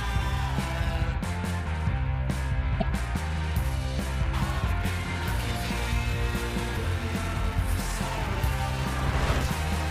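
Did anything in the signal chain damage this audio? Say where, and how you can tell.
Yes, damaged data in a compressed stream at 2.80–2.83 s and 6.73–6.77 s: the decoder loses frame sync and searches for the next frame header, producing brief disruptions.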